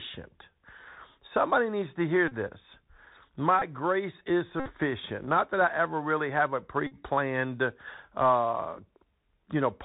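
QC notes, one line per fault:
throughout, Bluetooth CVSD headset codec: the speech is band-limited with nothing above 4 kHz. One-bit up/down coding with an adaptive step leaves a plainly audible granular hiss, scratchy s sounds and slope distortion on loud high sounds, which fits a 64 kbps headset link.
0.42, 2.28–2.32, 3.59–3.62, 4.60–4.69 and 6.87–6.96 s, Bluetooth headset packet repeated: lost voice packets were replaced by the previous packet decoded again. This covers gaps of about 11, 34, 23, 60 and 45 ms. The 3.75 ms repetition produces a brief buzz near 267 Hz.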